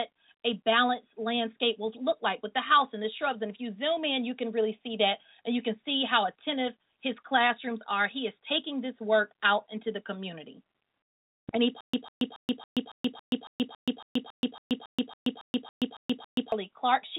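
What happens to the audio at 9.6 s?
Nothing goes wrong at 9.6 s: the audio runs on intact, still carrying the narrow call-codec band with nothing above 4 kHz that it has throughout.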